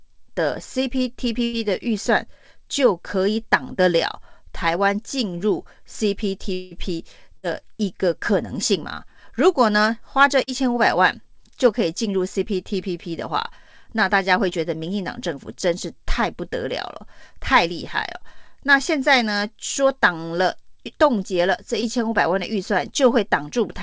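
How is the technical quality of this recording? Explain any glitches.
The recording has six network glitches, all from lost or late packets, and audio above 8 kHz is absent throughout, which fits a wideband call codec such as G.722 at 64 kbps.

Burst of packet loss at 1.44–1.55 s and 7.37–7.45 s: about 100 ms and 60 ms never arrived. The receiver stretched the last sound into a fading buzz or hiss, then jumped ahead.

Long network dropout at 6.53–6.73 s: about 180 ms of audio was lost, likely from a stall in the network. The whole gap is filled with a continued, fading sound and no silence, then the speech resumes further on.

Short concealed packet loss at 10.43–10.49 s, 14.49–14.53 s and 21.81–21.84 s: between 20 and 40 ms went missing each time. The decoder patched each hole by extending the preceding sound, leaving a brief smear or wobble.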